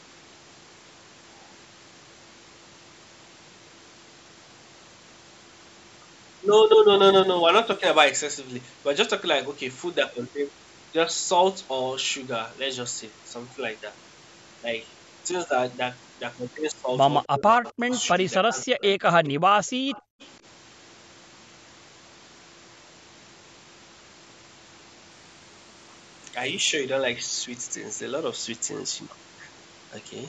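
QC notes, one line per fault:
6.99–8.10 s and 25.09–26.69 s, Bluetooth SBC bit pool drop: the link cut its encoding budget, which fits a fall from bit pool 28 to 13 (about 102 kbps), so the treble dulls and gritty noise rises.
17.26–19.04 s, speech suppressed in double talk: the speech dips by as much as roughly 30 dB for about a second in total, likely from the echo canceller ducking during simultaneous talk.
17.69–18.08 s, 19.25–19.29 s and 19.90–20.26 s, echo leak: a faint copy of the speech returns 260 ms late, about 20 to 25 dB down, likely residual loudspeaker echo the canceller missed.
19.33–20.20 s, background gated by the echo canceller: the canceller clamps the microphone, so room sound drops by up to about 40 dB for roughly half a second before returning.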